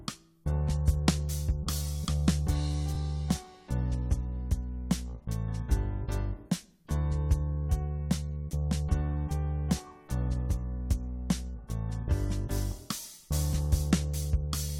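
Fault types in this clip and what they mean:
Repeated frames: At 2.94 to 2.96 s and again at 13.02 to 13.04 s, a single block of compressed audio, about 23.2 ms long, is played twice in a row. Each repeat lengthens the audio by 23.2 ms and sounds as a brief stutter. The block length points to one frame of a codec such as AAC at 44.1 kHz.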